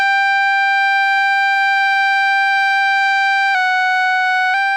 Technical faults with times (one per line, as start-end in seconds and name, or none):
3.55-4.54 drift correction step